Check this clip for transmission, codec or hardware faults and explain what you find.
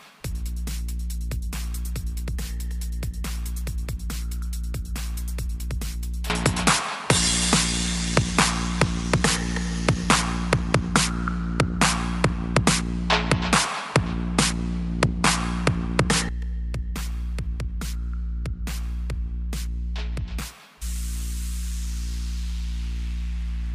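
One fault is present. From 6.30 to 16.29 s the input is likely switched to a poorer device, with the system taking its signal from a different microphone or a headset's call profile partway through and then returning to the original. During that stretch nothing is passed above 11.4 kHz, so the sound turns duller. The level shifts by roughly 5 dB, and a new background noise floor appears, sitting around 45 dB below the signal. Both changeovers happen with no silence at the switch.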